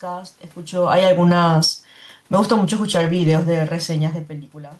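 A speech clip with two technical faults. Automatic gain falling runs from 0.8 to 4.45 s. The gain control found the input too loud, or its background noise too strong, and pulled its gain down slowly, by about 9 dB in total. The speech starts loud and then sinks in level. The room noise sinks with it, which separates this from the talker's own changes in distance near 0.5 s and 4.0 s. A lost packet rebuilt from error correction is heard at 1.05 s, and a longer stretch runs from 2.93 to 3.27 s. There is no gap in either place. The decoder filled the missing audio with low-bitrate copies carried in the following packets. Those rebuilt parts sound rougher and noisier than the speech around them. The first lasts about 20 ms, a single frame. The second lasts 180 ms, which fits nine separate lost packets.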